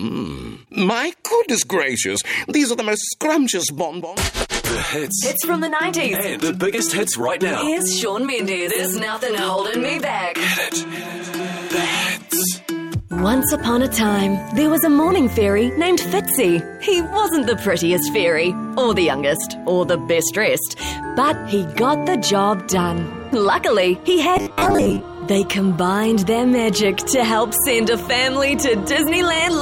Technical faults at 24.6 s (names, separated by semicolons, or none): robotic sound from repeated short buffers